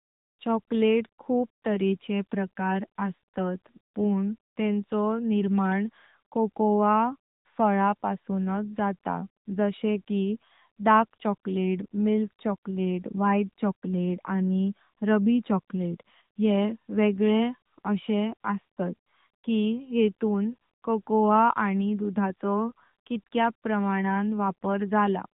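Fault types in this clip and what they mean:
AMR narrowband mobile codec: Phone-call speech coding throughout. Nothing passes above 3.8 kHz. Synthetic coding damage is plainly audible, which fits a mid-rate mode around 10 kbps.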